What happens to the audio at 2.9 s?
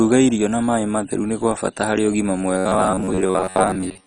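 At 2.9 s the sound is a rigid, metallic buzz near 93.8 Hz, running from 2.58 s, just after "kwa bata harĩ ũgima", to the end. This robotic sound from repeated short buffers likely comes from roughly 10.7 ms chunks being replayed over about half the audio.

The sound there is also dull and gurgling. That is heavy MP2 compression, likely at a low bitrate around 32 kbps, with upper sub-bands switched off and the rest coarsely quantised.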